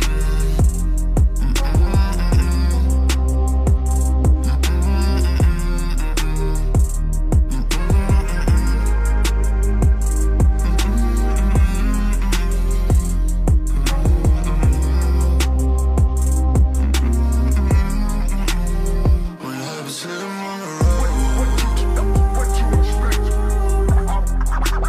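No technical faults can be heard anywhere in the audio.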